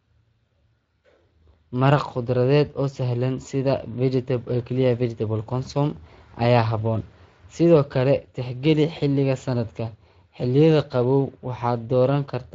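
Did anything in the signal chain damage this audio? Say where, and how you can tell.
Yes, at the codec: throughout, the speech sounds hoarse and grainy from Speex coding. Its CELP excitation is starved of bits, which roughens the sound instead of smearing it as MP3 would.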